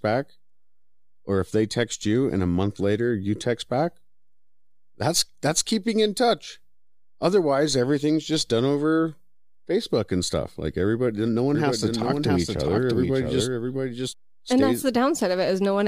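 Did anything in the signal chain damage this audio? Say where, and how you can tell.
Yes. After "everybody no one", from 11.55 to 14.13 s, a dry doubled audio track about 5 dB quieter trails about 0.7 s behind, likely a second capture path in the driver or buffer stage.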